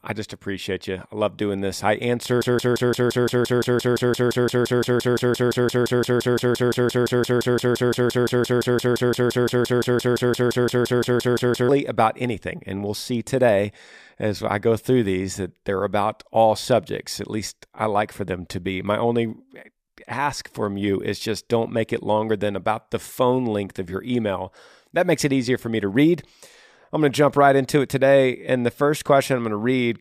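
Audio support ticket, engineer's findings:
Broken-record loop, 2.42–11.69 s, after "doing this I answer". 172 ms fragment repeats 54 times. Likely stalled stream resending its last fragment. Audio for that span lost.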